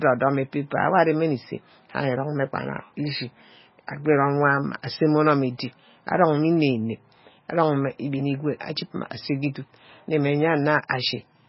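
The speech runs throughout through a heavily starved encoder, likely MP3 compression at a very low bitrate, consistent with something around 16 kbps. Short of bits, the encoder drops the treble outright, leaving nothing above 5.6 kHz, so the speech sounds dull and muffled, and it discards weaker spectral detail that flickers in and out between frames. The result is a watery, swirling texture, with smeared consonant onsets and metallic chirping on sibilants.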